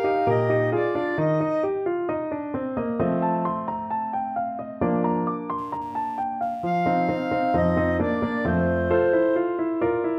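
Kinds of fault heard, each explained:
computer activity noise: Shifting processor or graphics load is disturbing the ground that the audio circuit shares with the computer, so a faint buzzy chatter pulsing at roughly 150 Hz, around 35 dB below the sound, rises from 5.58 to 8.35 s, independent of the audio itself.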